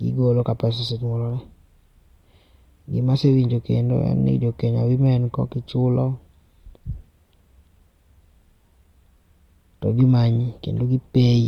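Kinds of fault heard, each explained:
Clock slip clicks: A faint, regular tick runs through the speech from 0.34 s to 11.46 s, about three per second, around forty in all. Each sounds like a single-sample jump. The likely cause is two devices running on separate, unsynchronised clocks that differ by roughly 70 parts per million. Each time that drift adds up to a whole sample, one sample is dropped or repeated, and the waveform jumps with a small click.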